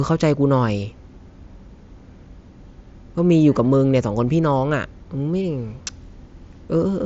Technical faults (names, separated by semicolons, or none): none